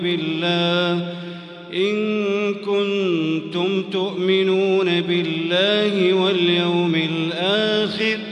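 No technical fault can be heard anywhere in this audio. Nothing interrupts, distorts or alters the sound at any point.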